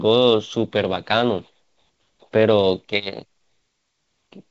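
No faults are audible in the speech, which comes through G.722 wideband telephone coding at 64 kbit/s with its expected band up to 7 kHz.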